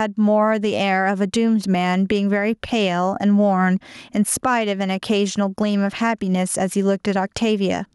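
Gain pumping runs through the whole speech clip. The level swings by around 10 dB between gaps and loud passages. The likely cause is input gain set far too high for the microphone, with a fast limiter or compressor clamping down on every loud sound. Loud and quiet passages sit unnaturally close in level, giving a squashed, breathing quality.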